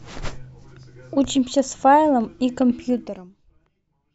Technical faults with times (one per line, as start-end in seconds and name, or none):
2.88-3.44 zipper noise